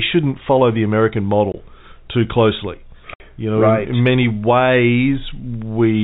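At 1.52 to 1.54 s, right before "too closely", the speech drops out for 20 ms. That's packet loss filled with silence: a packet never arrived, and the receiver played nothing in its place, so the hole has hard edges. A second, longer gap runs from 3.14 to 3.20 s, just after "too closely". At 60 ms it fits three consecutive 20 ms packets going missing, and the telephone-band G.711 audio cuts out abruptly on both sides.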